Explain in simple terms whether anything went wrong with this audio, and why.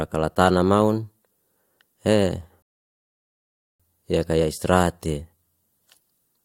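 At 2.62 s the speech stops dead and stays silent until 3.80 s, then carries on with "yeka ya israhate". This is a rebuffering stall: the player ran out of downloaded audio and waited about 1.2 s for more to arrive. What sets it apart from a dropout is that no speech goes missing. The sound picks up exactly where it froze, so the pause simply adds time to the clip.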